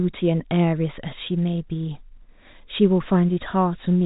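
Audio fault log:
No faults logged; the speech sits in the G.711 telephone band, with nothing above about 3.8 kHz.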